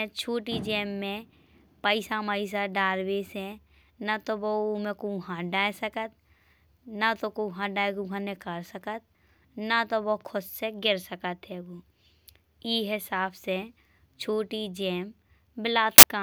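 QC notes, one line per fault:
15.98–16.03 s, file tags played as audio: a hard-edged burst of very loud white noise lasting about 50 ms near the end of the speech. Compressed data from an embedded cover picture is being decoded as samples, and its near-random bytes produce loud broadband static that starts and stops abruptly.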